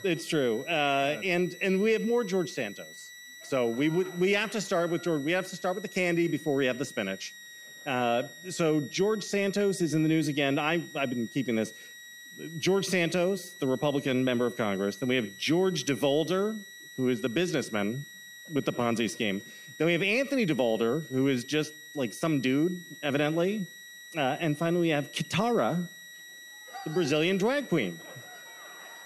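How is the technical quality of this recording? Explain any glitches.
The recording carries one steady fault. Throughout, a switching supply whistle: a power supply cycles in an audible burst mode, leaving a thin tone drifting between about 1.89 and 1.96 kHz, roughly 20 dB below the sound.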